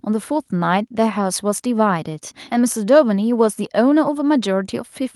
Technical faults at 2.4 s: none

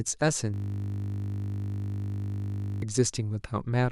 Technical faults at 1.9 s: system hang loop

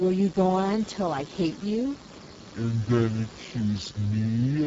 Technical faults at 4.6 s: Speex codec; section at the wrong speed

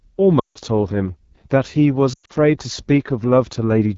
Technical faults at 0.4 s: AMR wideband (HD Voice) codec; lost AMR speech frames

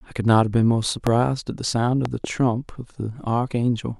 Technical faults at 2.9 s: none

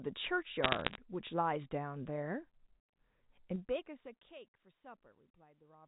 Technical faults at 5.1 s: none

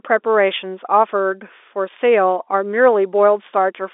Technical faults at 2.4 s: none

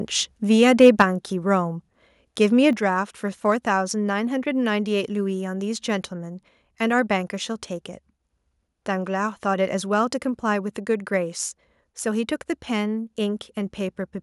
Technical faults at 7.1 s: none

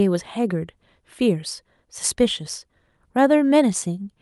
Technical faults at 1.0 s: none

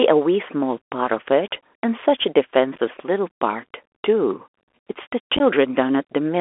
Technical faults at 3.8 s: Bluetooth CVSD headset codec

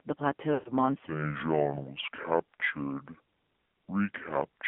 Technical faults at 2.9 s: AMR narrowband mobile codec; section at the wrong speed

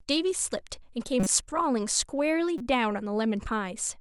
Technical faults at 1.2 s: corrupt frame decoded

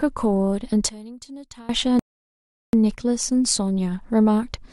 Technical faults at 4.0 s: none

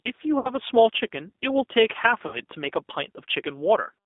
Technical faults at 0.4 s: G.729 codec; VoIP packet loss concealed by the speech codec

